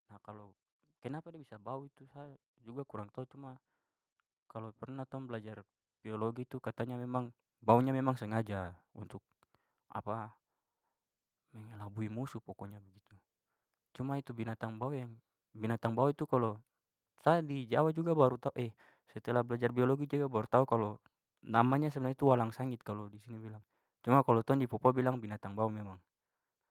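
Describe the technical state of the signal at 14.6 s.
Automatic gain rising is under way at 14.6 s, within a ramp from 11.37 to 15.82 s. The gain control judged the input too quiet and lifted its level by about 3 dB, so speech and background noise swell together, levelling off just before "bau itu".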